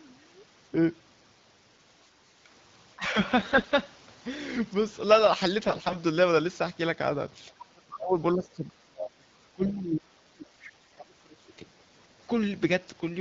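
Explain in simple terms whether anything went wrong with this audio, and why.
Speech suppressed in double talk occurs from 2.96 to 3.17 s, again from 7.48 to 8.17 s, and for a long stretch from 8.34 to 11.7 s. The voice dips sharply, briefly in the first spot and much deeper later, almost vanishing for several seconds. The likely cause is both people talking at once. The echo canceller, trying to remove the other person's voice from the loudspeaker, couldn't tell the two apart and turned this talker down too.

AMR bit errors appear at 3.39 to 3.74 s, 5.67 to 5.96 s and 10.42 to 11.01 s. Here the voice keeps roughly its pitch and loudness but turns hoarse, scratchy and gargly. The phone link flipped some of the less important bits in the coded speech while the most important ones arrived intact, so the decoder rebuilt the voice with its finer details wrong. The wideband HD Voice coding itself sounds clear elsewhere.

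The other side's voice leaking through is heard as a faint scrap from 9.63 to 9.73 s, well below the talker's level. The talker's device was likely playing the far end on a loudspeaker, and the echo canceller didn't scrub all of it out of the microphone, so a brief fragment of that second voice slips into the recording.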